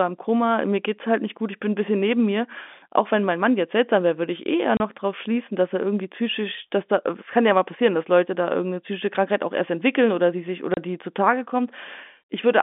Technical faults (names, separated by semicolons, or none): packet loss filled with silence